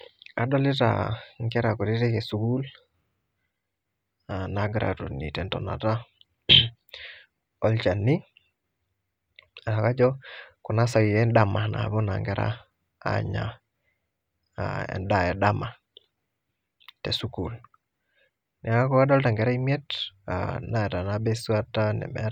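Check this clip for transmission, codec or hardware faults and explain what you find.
No transmission, codec or hardware faults can be heard.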